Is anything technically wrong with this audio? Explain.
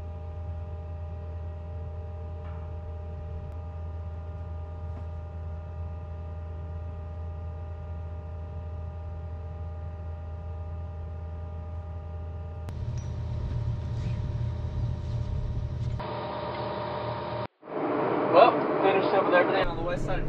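Yes. From 16.00 s to 19.64 s the sound abruptly turns duller and boxier, with nothing above 5.1 kHz, a level shift of a few decibels and faint new background noise well below the signal. There is no gap at the change. This is likely an input switched to a poorer device: the recording chain jumped to a different, narrower-band microphone or headset profile mid-take, bringing its own tone, gain and noise floor, before switching back.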